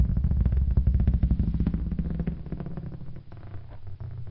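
From start to finish, the audio has a wrong sample rate fault. Everything runs at about one third of its proper speed. Pitch drops by 19 semitones, just over an octave and a half. Speed and pitch fall together because the samples are read out more slowly than they were captured, with no conversion between the two rates. The ratio fits audio recorded at 48 kHz and played back at 16 kHz. The sounds come out slow, deep and stretched.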